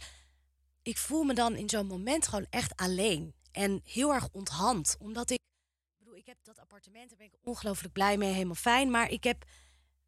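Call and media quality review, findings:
One channel inverted, 5.37 to 7.47 s. Speech level drops by about 24 dB, recovering at "blij mee helemaal fijn". Likely one stereo leg flipped in polarity. Mono fold-down cancels the shared centre content, leaving only the faint channel difference.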